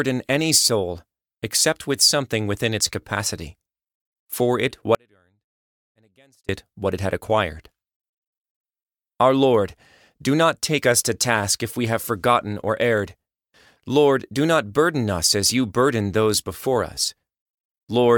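At 4.95 s, right after "for it", the speech drops out to a faint residue for about 1.54 s, returning abruptly at 6.49 s with "it what it had". The signal was likely lost upstream while the path stayed live, leaving only a faint sound about 35 dB below normal. The waveform shows a sudden collapse to a thin band, and the spectrogram goes almost blank.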